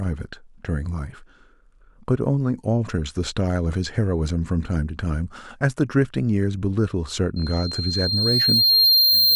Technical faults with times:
7.36-9.35 loudspeaker feedback squeal

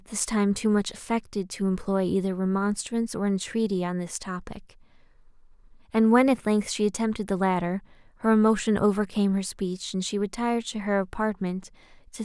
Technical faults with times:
none

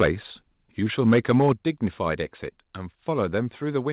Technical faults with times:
0.00-0.07 microphone overload
1.06-1.52 microphone overload
1.53 microphone volume stepped down
3.48 microphone volume stepped down

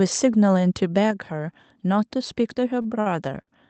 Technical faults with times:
1.11 microphone volume stepped down
2.81-3.08 short stall from a late packet
3.42-3.49 short stall from a late packet

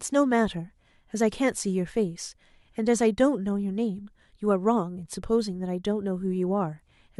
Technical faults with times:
none

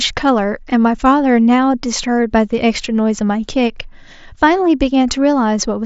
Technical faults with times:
none

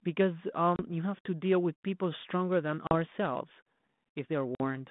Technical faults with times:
0.76-0.81 packet loss on an ADPCM call
2.87-2.92 packet loss on an ADPCM call
4.55-4.61 packet loss on an ADPCM call

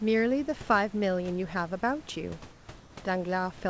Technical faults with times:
2.52-2.96 comfort noise in place of the background

